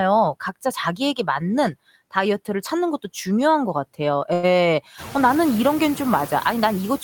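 Noise suppressor artifacts run through the whole clip. The suppressor lowers the background by about 16 dB wherever it judges the sound to be steady noise, one frame at a time, so the residue dips in the gaps between phrases and comes back up underneath the speech.

A short stall from a late packet comes at 4.33 to 4.46 s. One packet arrived late and the jitter buffer ran dry, so the receiver held the last sound for 97 ms until the packet turned up. Nothing is lost, but the held sound drags, and everything after it sits 97 ms later.

Around 5 s the room noise rises by about 19 dB, though it stays about 17 dB below the speech.

Low bit depth with noise shaping begins at 5.31 s and lasts to the end. The rounding noise from a very coarse signal, which fits roughly 7 bits, has been pushed upward in frequency. The result is a steady, thin hiss that climbs sharply toward the top of the band and sits roughly 15 dB under the speech.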